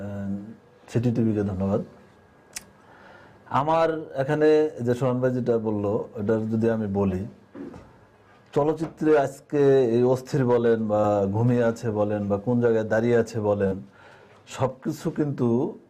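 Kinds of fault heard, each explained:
Short concealed packet loss: two brief stretches of the stream never arrived in time, around 11.01 to 11.05 s and 13.67 to 13.73 s, with about 20 ms and 40 ms missing. The decoder covered each hole by extending the preceding sound, then blended back, so instead of a hard silent gap or a sharp click you hear a momentary smear or wobble, longer at the second spot.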